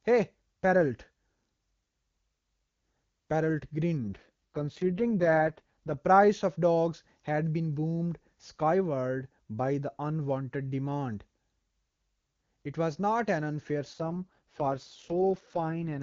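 Speech over an AMR wideband (HD Voice) link shows an AMR rate drop twice, from 3.99 to 5.98 s and from 13.93 to 16.02 s, where the voice turns rough and synthetic. This fits the codec falling from about 23.85 to 6.6 kbit/s. The spectrogram keeps its full band with no gap in the waveform, but the harmonics look smeared and noisier.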